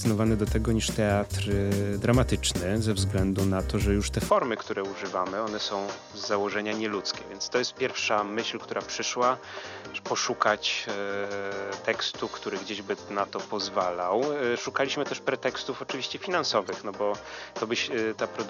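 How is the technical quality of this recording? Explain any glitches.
The recording has a clear drop in quality partway through and two brief decoding glitches.

From 4.3 s to the end, the sound likely comes from an input switched to a poorer device. The system appears to have moved capture to a lower-grade microphone or headset path. That device passes nothing above 6.6 kHz, so the audio turns duller and boxier at once, with no gap at the switch. The level falls by about 5 dB, and a faint new noise floor appears, roughly 45 dB below the signal.

Corrupt frames were decoded at 8.00 to 8.02 s and at 16.65 to 16.69 s. Each time, damaged bits in the compressed stream were decoded anyway, and misread gains and codes put energy at the wrong frequencies for about two frames' worth of audio. Each is heard as a short chirp or burst of noise. The first is the louder, peaking around -25 dBFS, and the second reaches around -35 dBFS.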